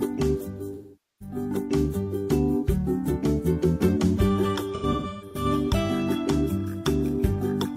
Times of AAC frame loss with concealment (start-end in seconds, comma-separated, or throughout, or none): 0.73-1.35, 4.74-5.45